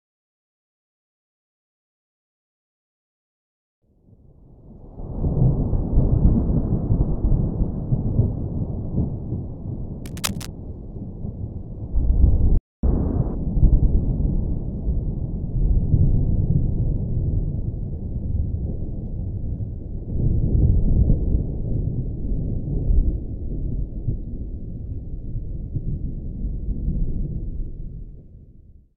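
From 10.06 to 10.47 s, cable scratch noise sits about 10 dB below the sound as a burst of uneven scratching. A worn connector or cable being moved is the likely cause. On a spectrogram it shows as ragged broadband smearing, and in the waveform as dense, irregular spikes.

At 12.57 s a playback stall cuts the sound off mid-flow for about 256 ms, until 12.83 s. The player likely ran short of data or its thread was held up. The waveform drops to a flat line and the spectrogram shows a blank vertical gap.

The catch-up at higher speed follows immediately, from 12.83 to 13.35 s. The player works through its backlog at 1.5 times normal speed, so pitch jumps up by roughly seven semitones. On a spectrogram the harmonics shift upward and sit more widely spaced for that half-second.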